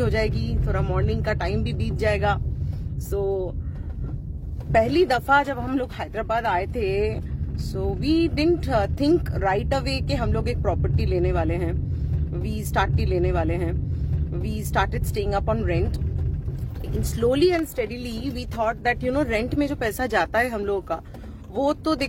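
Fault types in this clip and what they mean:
Stream segment repeated: the player queued the same stretch of audio twice, so about 2.0 s of sound plays again from 12.82 s to 14.82 s, with a small blip at the jump back. Unlike an echo, the repeat is a complete, full-level copy, not a fainter delayed overlay.
Electrical switching spike: a sharp snap at 17.59 s, lasting only a few milliseconds and sitting on top of the sound without interrupting it. This is likely a nearby switch or static discharge arcing into the audio line, rather than a digital dropout, which would briefly cut the sound instead.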